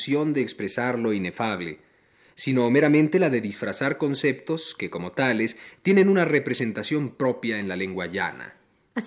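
A short stretch of speech, and nothing in it stands out as a technical problem, so there's nothing here to flag.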